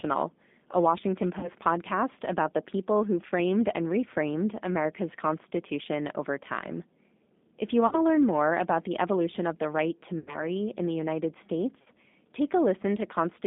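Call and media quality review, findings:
G.729 codec, entire clip: speech band-limited to about 200 Hz to 3.6 kHz, with a plainly audible rough, slightly synthetic grain. The decoder rebuilds each 10 ms frame from a vocal-tract filter, a pitch predictor and sparse pulses at 8 kbit/s. Unlike a simple narrowband filter, which only dulls the sound, this adds a buzzy, processed texture even on clean syllables.

VoIP packet loss concealed by the speech codec, four events:
1.39–1.49 s, just before "podcast about the people"
7.87–7.96 s, just before "to learn more about"
10.19–10.44 s, between "of the right to" and "in the"
11.82–11.88 s

Each gap is smeared into a fading buzzy tone or coloured noise instead of silence. The decoder repeats its last pitch and filter with falling gain. About 40 ms is missing in three events, which fits two 20 ms packets. About 80 ms is missing at 10.19 s. Unlike hard dropouts, there is no click or dead air, and the speech stays weak for a moment after each gap.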